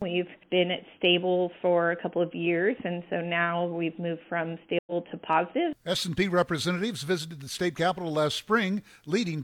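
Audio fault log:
4.79–4.92 s, stream reconnect: the sound drops out for 80 ms and comes back a little further on, with a small piece, about 50 ms, missing rather than the sound picking up where it stopped. The connection broke, so playback went quiet while the player reconnected and started a fresh decoder in mid-stream. Because it rejoined a live feed, it resumed slightly later than where it dropped, leaving a short skip after the gap.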